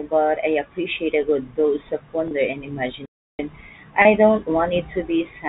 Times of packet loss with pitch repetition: 2.28-2.31, 4.02-4.05

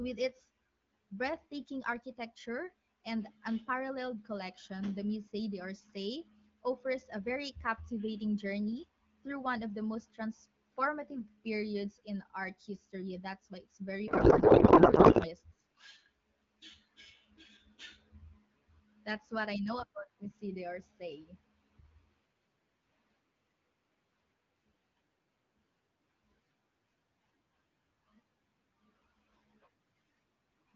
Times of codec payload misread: 14.07-15.31

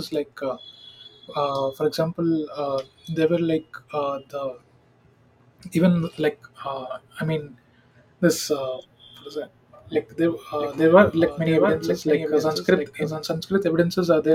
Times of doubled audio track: 10.59-13.29

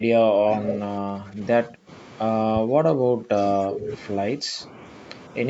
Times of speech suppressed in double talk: 0.33-1.40, 1.67-1.90, 2.53-3.30, 3.68-3.91, 4.37-4.74

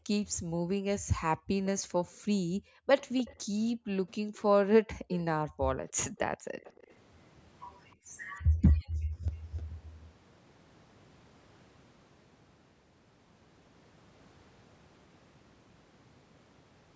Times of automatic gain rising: none

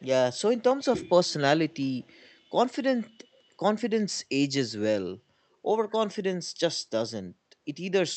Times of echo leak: 2.02-2.29

